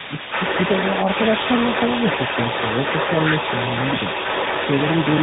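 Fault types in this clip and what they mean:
Tandem speech coding: The speech passes through two speech codecs in a row, AMR-NB at 12.2 kbit/s and then G.726 at 32 kbit/s, with a G.711 mu-law link between. Each stage re-encodes the previous stage's errors, leaving rough, muffled, warbly speech with nothing above 3.8 kHz.
Other side's voice leaking through: From 0 to 5.22 s a second voice is present at roughly the same level as the main speech. This is likely far-end loudspeaker sound picked up by the microphone that the echo canceller failed to remove.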